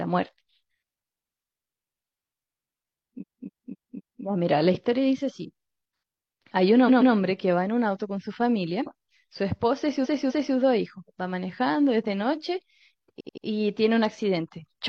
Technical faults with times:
3.18-4.20 repeated frames
6.85-7.10 repeated frames
10.01-10.52 repeated frames
13.16-13.42 repeated frames

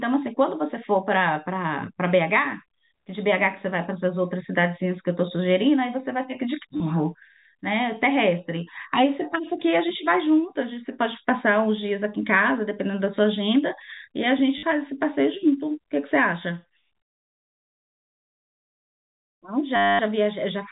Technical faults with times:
6.77-6.80 packet loss with last packet repeated
14.58-14.63 packet loss with last packet repeated
19.76-19.99 packet loss with last packet repeated

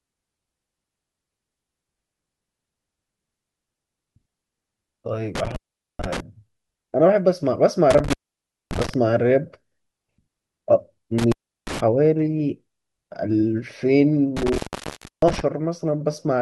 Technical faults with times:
5.35-6.20 intermittent contact
7.90-8.94 intermittent contact
11.18-11.80 intermittent contact
14.37-15.41 intermittent contact

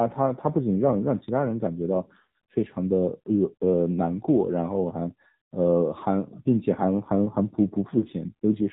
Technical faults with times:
0.00-8.72 AMR narrowband mobile codec

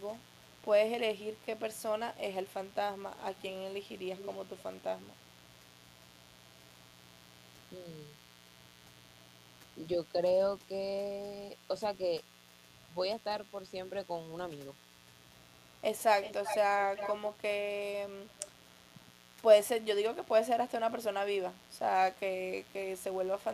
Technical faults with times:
0.00-23.54 mains buzz
3.38-3.42 echo leak
4.17-4.30 echo leak
7.76-7.86 speech suppressed in double talk
16.22-17.15 echo leak
18.30-18.51 echo leak

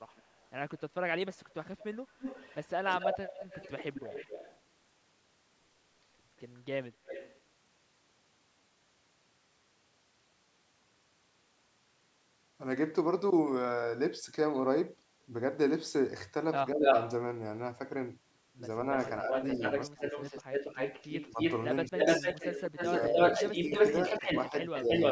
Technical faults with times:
0.09-4.60 echo leak
6.37-7.40 echo leak
16.73-16.84 speech suppressed in double talk
16.81-17.12 echo leak
19.02-25.11 echo leak
19.23-20.04 speech suppressed in double talk
21.30-24.90 speech suppressed in double talk

